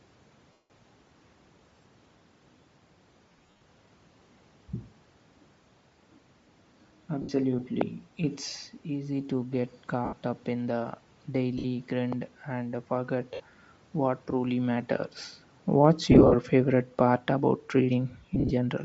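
Throughout the speech, the audio has likely been carried by Bluetooth LC3 compression at a low bitrate, which fits about 32 kbps with 10 ms frames. The encoder discards much of the upper spectrum and fills it with noise, giving voices a plainly audible breathy, grainy edge.

Lost LE Audio frames occur at 0.52 to 0.70 s (180 ms), 3.29 to 3.61 s (220 ms scattered over 320 ms, with runs up to roughly 70 ms), 7.22 to 7.30 s, 10.05 to 10.13 s (between "easy to get" and "up in"), 11.58 to 11.65 s, 13.34 to 13.40 s (just before "what truly"), 16.12 to 16.36 s (160 ms scattered over 220 ms) and 18.35 to 18.52 s. Each time, the decoder repeats the last spectrum with scrambled phase, so the voice smears into a noisy hiss. The longer gaps fade toward silence.

A loud pop lands at 7.81 s and another at 12.13 s, each a single sharp click about 15 dB above the speech. These are likely voltage spikes from static or a driver glitch, and the speech continues underneath them.

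From 15.79 to 18.69 s, an automatic gain falling fault occurs: the gain control judged the input too loud or its background noise too strong and eased its gain down by about 3 dB. The voice and its background sink together gradually.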